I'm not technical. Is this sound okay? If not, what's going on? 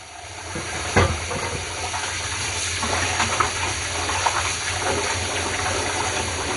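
No. From start to finish the sound is dull and muffled, with a gurgling, grainy roughness, and nothing above about 11 kHz. This is likely MP2 compression squeezed too hard: the top parts of the sound get switched off, and what remains is stored crudely.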